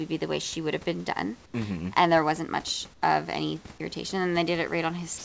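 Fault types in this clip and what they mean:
Comfort noise in place of the background: Twice, the room's real background gives way to a flat, featureless hiss for 80 ms. It happens at 1.46 s just after "would have been done", about 6 dB quieter, and at 2.94 s between "there wasn't much" and "of any irritation", about 5 dB quieter. The likely cause is discontinuous transmission: the sender paused in these gaps and the receiver filled them with synthetic noise roughly matching the background.
Sound dropped by the voice detector: At the very end, from 5.18 s to 5.25 s, about 60 ms of sound is lost and replaced by steady synthetic noise. The likely cause is the sender's voice detector taking this final sound for background and stopping transmission. The receiver then played comfort noise for the last 70 ms.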